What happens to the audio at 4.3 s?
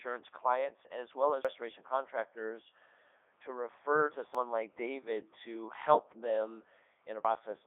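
At 4.35 s, audio is missing between chunks, likely because the recorder, working in 3-second chunks, dropped about a tenth of a second when it switched chunks. The two sides join with no gap, so the sound skips abruptly. The Codec 2 vocoder at 3.2 kbit/s runs across this moment too. It rebuilds the signal from sine waves, leaving it robotic and buzzy with nothing above 3.8 kHz.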